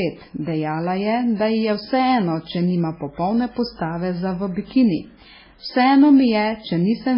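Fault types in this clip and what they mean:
MP3 compression: likely an MP3 encoder starved of bits, consistent with about 16 kbps, so the speech loses everything above 5.3 kHz and sounds heavily muffled and watery.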